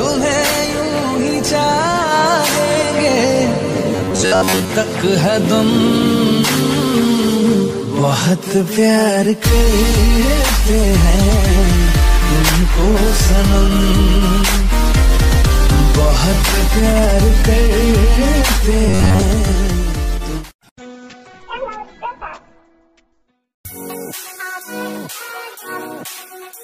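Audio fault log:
3.96–4.71 s and 18.88–19.24 s, robotic sound from repeated short buffers: a rigid metallic buzz at a fixed 93.8 Hz, fitting a repeat of about 10.7 ms, likely from late audio being covered by looping the last short buffer. Unlike gaps or stutters, the buzz holds that fixed rate.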